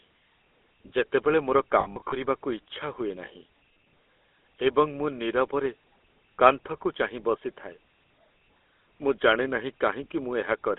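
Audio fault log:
throughout: GSM full-rate codec. The speech has a plainly audible buzzy, gravelly roughness. The codec rebuilds the voice from a vocal-tract model fed by sparse regular pulses at 13 kbps, within a line band of 250 Hz to 3.4 kHz. Unlike plain band-limiting, the roughness sits inside the passband itself.
1.80–2.17 s: lost GSM frames. Just after "ଯେତେବେଳେ ମୋର", about 220 ms of frames drop out, scattered over roughly a third of a second. Each gap is bridged by repeating the last good frame, giving a metallic, ringing hold. Runs are short, around 70 ms at most, so the ring never fades fully to silence as a long dropout would.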